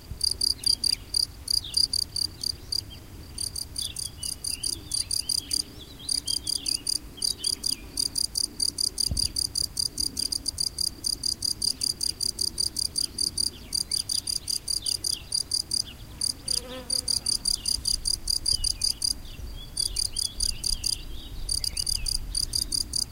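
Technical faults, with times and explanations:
10.31–10.50 s and 21.64–21.83 s, chunks out of order: two roughly 93 ms blocks play swapped, giving a brief jumble, but no missing sound like a dropout.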